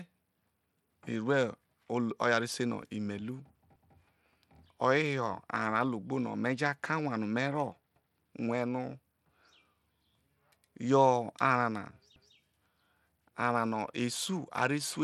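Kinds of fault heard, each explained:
Bluetooth SBC compression: The speech was likely squeezed through the SBC Bluetooth codec at a low bit pool, where the few bits available are spread across wide sub-bands and the weakest upper bands are starved. The damage is plainly audible throughout: the treble thins out and flickers in and out, and a gritty, grainy noise with aliasing hangs on the speech. The degree of damage fits a bitrate of around 96 kbps.
overlapping chunks: The audio was handled in blocks of about 4 s, and each new block began 200 ms before the previous one had finished, so the shared stretch plays twice. At each join, at 3.76, 7.96 and 12.16 s, a 200 ms fragment of speech repeats, heard as a click or a stutter. The regular 4.2 s spacing gives the pattern away.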